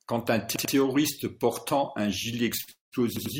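At 0.56 to 0.74 s comes a repeated buffer: fresh audio was not ready, so the device replayed the last block, here about 93 ms long, which fits a 4096-sample buffer, twice more. It is heard as a stutter, the same fragment of speech sounding three times with a hard join at each restart. On a spectrogram the repeats show as identical blocks side by side, separated by sharp vertical edges where the waveform jumps.

Just after "portant un gilet", from 2.61 to 2.69 s, a short stall from a late packet holds the last sound for 66 ms. The jitter buffer ran dry, so the receiver stretched what it had until the packet arrived, then resumed at the same point with nothing lost. It is heard as a briefly prolonged, slightly buzzy sound. A waveform shows a short stretch of near-periodic repetition, and a spectrogram shows horizontally smeared, frozen harmonics.

Right after, from 2.71 to 2.94 s, a call audio freeze adds a 206 ms gap. 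The last sound continues as a fading buzz and then drops to silence for about 150 ms before the speech picks up where it left off. The likely cause is packets held up in transit, emptying the jitter buffer. A spectrogram shows a decaying smear followed by a blank column.

From 3.17 to 3.35 s, later in the same stretch after "portant un gilet", a second repeated buffer plays the same roughly 93 ms block two extra times. It produces another hard-edged stutter that looks the same on a spectrogram.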